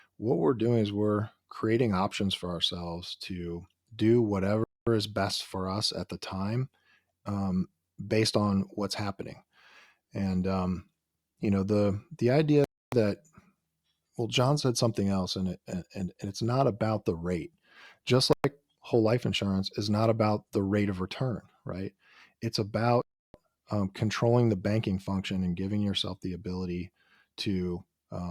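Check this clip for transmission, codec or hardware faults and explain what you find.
Two kinds of fault are audible in this speech: four short dropouts and one tiny hole.

Bluetooth stall, at 4.64 to 4.87 s, 12.64 to 12.92 s (right after "know the the idea"), 18.33 to 18.44 s (just before "whole life") and 23.02 to 23.34 s. The sound drops to silence for between 0.11 and 0.33 s, then resumes where it left off. The likely cause is radio interference delaying packets until the headphones' buffer emptied, so playback halted while retransmissions caught up.

Block of digital silence, at 19.34 s, between "whole life" and "is not about the". A gap of about 2.9 ms is heard as a tick or dip rather than a pause, with the sound switching hard to silence and back without any fade. Its length fits a 128-sample block left unfilled, typically when the software misses its deadline for supplying the output buffer.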